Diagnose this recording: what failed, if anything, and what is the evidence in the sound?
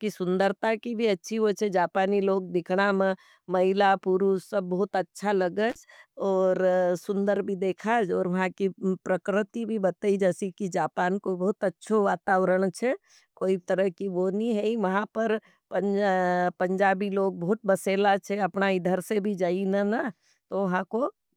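The failure is in the analogue wiring: an intermittent contact, where a loose cable or plug briefly loses connection. In this speech clip it occurs between 5.70 and 5.76 s, after "सब बहुत अच्छा लगेगे" and before "और सुन्दर भी देखे". The signal drops out for about 38 ms, with crackle as the contact breaks and remakes. While the line is open, faint hiss remains instead of the program signal.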